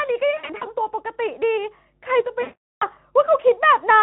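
A steady low 50 Hz mains hum sits under this speech recording throughout, around 30 dB below the voice. It is a constant drone leaking in from the power line, most likely via a ground loop or a nearby transformer. Between 0.37 and 0.66 s the voice turns buzzy and smeared in several short bursts, the longest about 60 ms, totalling around 140 ms. A longer stretch from 2.42 to 2.89 s fades into a droning tone and stays weak afterward. This is VoIP packet loss concealed by the speech codec: the Speex decoder, which is otherwise only lightly colouring the voice, keeps stretching its last pitch and filter at falling gain while packets are missing, and then takes time to recover.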